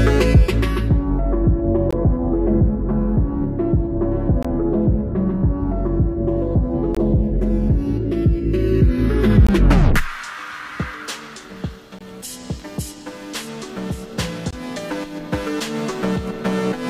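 A gap between chunks opens six times, at 1.91–1.93, 4.43–4.45, 6.95–6.97, 9.47–9.49, 11.99–12.01 and 14.51–14.53 s. Each is a 20 ms hard-edged hole of silence, recurring every 2.5 s of sound as the chunks are joined with dead air between them. Unlike a dropout, nothing is lost: the audio resumes exactly where it stopped, and the holes fall on a strict, even rhythm rather than at random.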